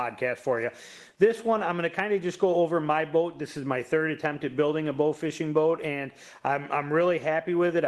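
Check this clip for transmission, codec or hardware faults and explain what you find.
Two related transmission faults are present, both rooted in mismatched clocks.

Clock drift between sender and receiver runs through the whole clip. The sender's audio clock runs roughly 1.5% slower than the receiver's, so the jitter buffer keeps draining: data arrives a little slower than it is played out. The receiver has to stretch the stream to keep playing. The result is an unsteady pacing that persists for the full duration rather than appearing as a single glitch.

Repeated timing corrections run from 0.54 s to 7.69 s. To cover the shortfall, the receiver repeatedly repeats short pieces of audio, always in the same direction and at uneven spacing. Together they add around 150 ms, so the stretch plays at about 98% speed. Each edit is short. Where they can be heard, they come across as small hiccups or a tempo that drags unevenly.

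The call path itself shows the ordinary coding character of Opus at a rate that fits about 20 kbps, with the high frequencies cut off at 12 kHz.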